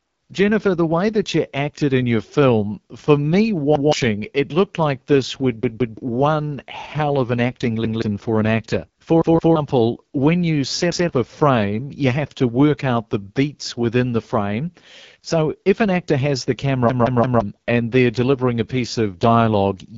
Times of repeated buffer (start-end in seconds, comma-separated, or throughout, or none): 3.75-3.93, 5.63-5.97, 7.85-8.02, 9.22-9.56, 16.90-17.41